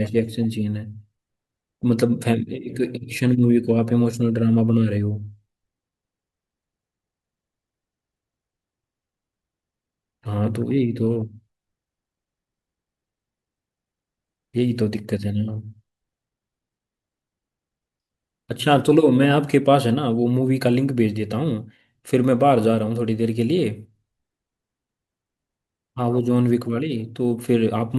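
Nothing in the speech here gives any sign of a technical fault at any point, so there's simply nothing to pin down.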